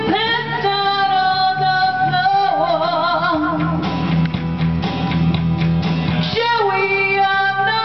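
No technical faults can be heard anywhere in the audio.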